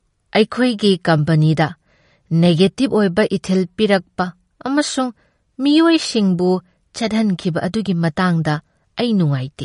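Throughout the speech, the likely cause is MP3 compression at a starved bitrate, which fits roughly 42 kbps. The encoder discards everything above 10.6 kHz and lets weak frequency lines flicker between frames, so s sounds turn plainly watery and swirly, and onsets smear.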